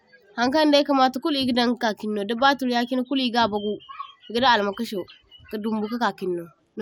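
No technical faults are audible.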